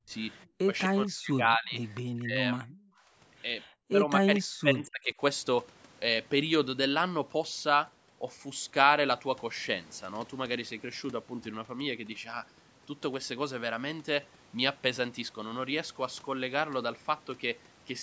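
From 0.0 to 0.11 s, 0.65 to 0.69 s, 0.85 to 1.8 s, 2.19 to 2.9 s and 3.9 to 5.2 s the speech sinks or breaks into pieces, dropping by up to roughly 40 dB. This is likely speech suppressed in double talk, where the echo canceller mistook the talker for loudspeaker echo and turned the talker down.

At 4.35 to 4.39 s, inside the last dip, a faint scrap of the voice returns about 241 ms late, roughly 30 dB below the speech. This is likely an echo leak, where loudspeaker sound the canceller missed was picked up and sent back.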